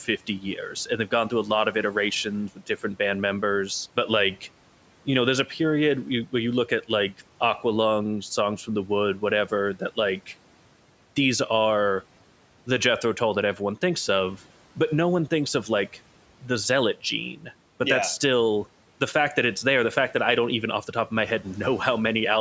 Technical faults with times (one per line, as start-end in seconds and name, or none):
0.05-1.12 speech cut by the noise suppressor
2.56-2.83 speech cut by the noise suppressor